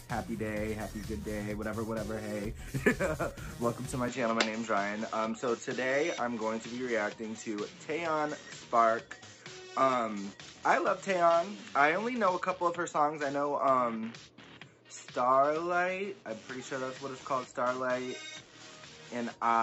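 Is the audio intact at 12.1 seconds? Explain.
No. From 4.08 s to the end, the input likely switched to a poorer device: nothing above 7.6 kHz, so the sound is duller, with no gap or level jump.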